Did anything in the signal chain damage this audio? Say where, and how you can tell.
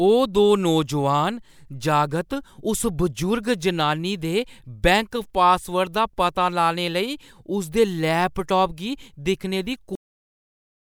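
Yes. A cut-off end at storage, from 9.95 s. Speech stops mid-sound and drops to digital silence without decay. The final buffers were never written.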